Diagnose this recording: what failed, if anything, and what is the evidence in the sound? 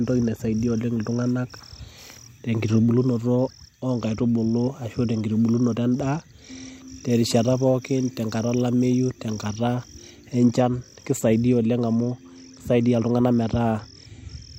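Pre-emphasis left on, 7.10 to 9.75 s, playback stage: the speech turns thin and sibilant, treble about 8 dB hot at 10 kHz, fitting uncorrected CD 50/15 µs emphasis.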